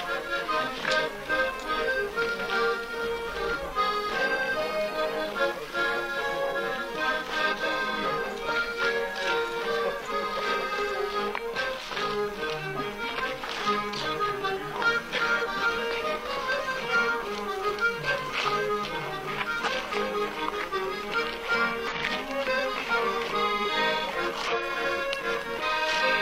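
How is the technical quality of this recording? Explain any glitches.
The recording is marred by five brief instances of damaged data in a compressed stream, at 7.48–7.54, 10.50–10.55, 19.88–19.93, 21.88–21.93 and 24.48–24.54 s. Each lasts about 50–60 ms. Corrupted bytes make the decoder misread frames and lose sync, producing a short chirp or squawk, seen as a broadband smear on a spectrogram and a jagged discontinuity in the waveform.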